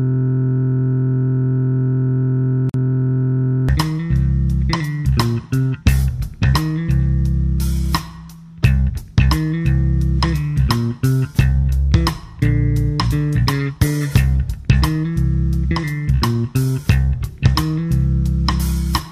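The audio opens already caught in a system hang loop. From 0.0 s to 3.69 s a single 23.22 ms slice repeats exactly, over and over, fusing into a steady buzz at 43.1 Hz. The driver or machine has frozen while the sound hardware keeps replaying one ring buffer, and the loop length fits a 1024-sample buffer. Unlike a stutter, which repeats varied fragments, every cycle here is identical. Because the buffer is so short, the result is a pitched drone rather than a machine-gun rattle. At 2.69 s to 2.74 s a separate fault cuts in: a 47.7 ms gap at a join of encoded pieces. Two separately encoded segments were joined untrimmed, so the encoder's start-up delay and last-frame padding remain as silence. A random dropout would not look like this. The gap's edges are smeared by the codec, and the sound resumes exactly where it stopped rather than skipping ahead.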